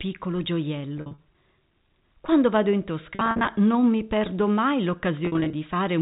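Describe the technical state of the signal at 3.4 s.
At 3.4 s the sound stutters into short, held buzzy fragments, between "vado in" and "non mi perdo mai" (3.15 to 3.47 s). This is packet loss with pitch repetition: 170 ms went missing across 320 ms, in runs of up to 50 ms, each gap bridged by repeating the last pitch period.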